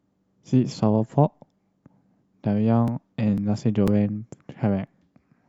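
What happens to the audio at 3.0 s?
Periodic USB or driver dropouts, 2.88–5.37 s: a blocked bus skips about 2 ms every 0.5 s, causing regular ticks, seen as evenly spaced waveform jumps and thin vertical spectrogram lines.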